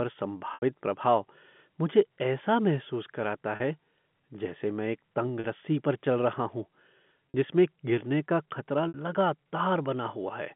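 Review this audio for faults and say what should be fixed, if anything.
Five short dropouts show packet loss with pitch repetition: 0.54 s (80 ms), 3.56 s, 5.40 s, 7.32 s (each 40 ms) and 8.88 s (60 ms). The receiver loops the last pitch period, so the 40 ms gaps sound like a brief buzzy hold, while the 60 ms and 80 ms ones fade into silence before speech cross-fades back in. The 80 ms one fits four 20 ms packets. The G.711 phone-band coding itself comes through fine. To prevent these gaps, add a bigger jitter buffer or forward error correction on the link.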